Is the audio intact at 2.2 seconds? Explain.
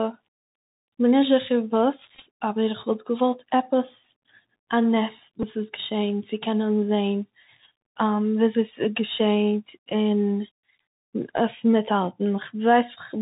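No. Between 2.15 and 2.24 s, Bluetooth headset packets were lost and the chip repeated the previous packet's bits, so runs of up to about 15 ms buzz near 267 Hz. Underneath, the Bluetooth CVSD headset codec's one-bit 64 kHz coding cuts everything above 4 kHz, leaving scratchy s sounds and a granular hiss.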